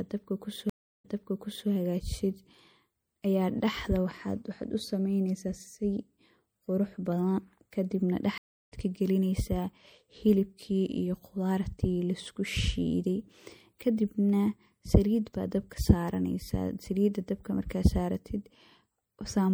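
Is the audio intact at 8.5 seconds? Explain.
No. A stream reconnect spans 8.38 to 8.72 s: the connection dropped, the player fell silent for 336 ms, then reconnected and restarted its decoder mid-stream. The sound resumes roughly 0.4 s further on, so a short stretch is simply missing.

Underneath, the coding is likely MP3 compression, with damage that fits a bitrate around 64 kbps. Starved of bits, the encoder trims the treble and drops weak frequency lines frame by frame, leaving a plainly audible watery, swirling quality and smeared attacks.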